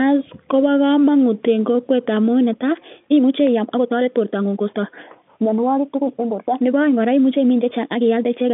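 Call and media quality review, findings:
Time-stretched section, 2.4 s to end of clip. Speech pace jumps abruptly to 1.56 times normal while pitch holds. Rushed delivery. Likely a software stretch stage compressing audio to fit a length, dropping short slices to preserve pitch.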